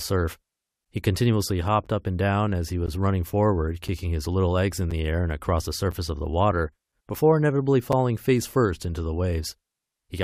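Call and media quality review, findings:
Gap between stream segments: hard-edged silent holes of 6 to 14 ms at 0.85, 1.86, 2.86, 4.91, 5.91 and 7.92 s, on 1 s segment boundaries. Segment timestamps leave a gap that the player fills with silence, with no audio lost.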